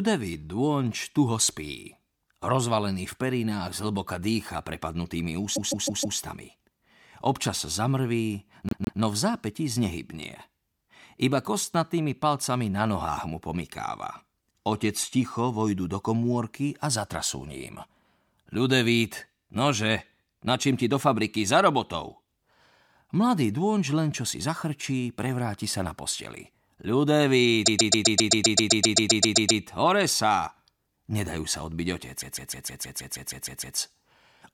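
Repeated frames make the speech stutter at 5.55–6.18 s, 8.69–9.00 s, 27.65–29.61 s and 32.20–33.77 s. A block of compressed audio about 157 ms long (131 ms in the third run) plays again and again, and each repeat adds time to the audio.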